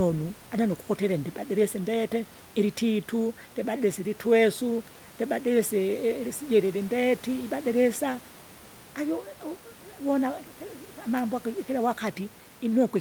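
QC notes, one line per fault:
No faults found; room noise sits about 21 dB below speech.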